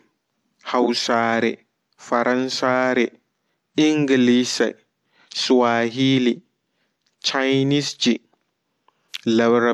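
No technical faults can be heard anywhere in the recording.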